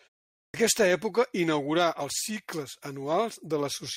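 Right at 0.4 s there's a clipped start after a pause: the speech comes in abruptly after about 0.4 s of silence, missing its first 141 ms or so, because the output device dozed off in the quiet and hadn't woken up in time.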